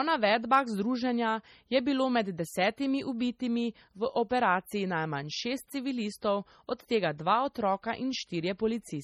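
From start to finish, the speech carries heavy MP3 compression artefacts. The encoder seems starved of bits, which fits a rate near 32 kbps. Weak frequency lines drop out and return from frame to frame. That gives a watery, swirling texture. S sounds turn metallic and chirpy. Consonant attacks smear. Nothing is heard above 18.3 kHz. This damage is likely from encoding at too low a bitrate.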